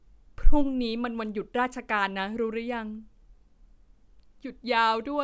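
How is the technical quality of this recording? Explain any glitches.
The technical quality of this recording is sound, with no glitches to explain.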